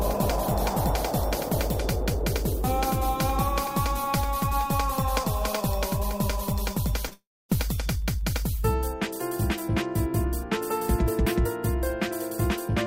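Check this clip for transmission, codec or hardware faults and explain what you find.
Two transmission faults occur back to back just after 7 s, one flowing into the other.

From 7.07 to 7.13 s there is short concealed packet loss: about 40 ms of audio arrived too late to decode, and the receiver patched roughly 38 ms of it by extending the preceding sound's pitch or noise character. It comes across as a brief smear rather than a gap. That distinguishes it from a click or edit, because the sound keeps flowing, blurred, instead of stopping.

Immediately after, from 7.13 to 7.51 s, the audio collapses into a fading buzz or hiss and then goes silent for about 250 ms before resuming, with roughly 360 ms absent in total. This is most likely a long network dropout, where packets stopped arriving for longer than concealment can cover. The giveaway compared with the short loss is that the patch visibly runs out and decays into silence. 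Compared with a natural pause, the sound resumes with material missing.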